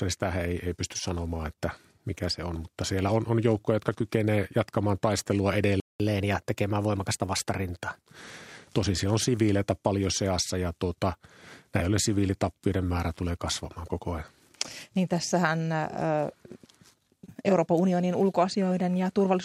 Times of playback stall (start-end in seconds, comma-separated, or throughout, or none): 5.80-6.00